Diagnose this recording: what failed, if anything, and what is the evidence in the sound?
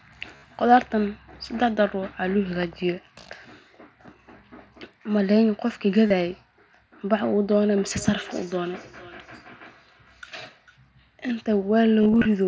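Concealed Bluetooth headset packet loss occurs at 0.36 to 0.43 s, 6.07 to 6.10 s, and 12.02 to 12.25 s, on the radio link between headset and phone. The first gap is about 68 ms, which fits roughly nine lost frames, and it fills with a held, buzzy tone. The second lasts about 30 ms. Near the end, about 128 ms of losses are scattered across 263 ms, with no run longer than 22.5 ms. The receiver pads each gap by repeating the best-matching piece of the last few tens of milliseconds.

Feedback echo between two devices runs from 7.75 to 10.81 s. The speech comes back about every 400 ms, thin and ringing, peaking at about 24 dB below the direct speech. This is an acoustic loop at the call stage. A second device in the same room plays aloud what this microphone sent, and this microphone picks it up again. The echo canceller here cannot remove it because it only subtracts what its own device plays.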